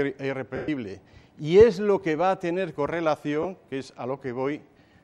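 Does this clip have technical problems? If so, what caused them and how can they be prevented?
Yes. There are lost LE Audio frames at 0.56 to 0.68 s and again at 3.43 s. The first gap lasts 120 ms, which fits a run of twelve 10 ms frames. The decoder fills it by replaying the last spectrum with scrambled signs. The sound turns into a noisy smear and then fades as the loss continues. The second gap is 20 ms and is a brief blur. Prevention: keep the link strong and allow retransmission or a larger buffer.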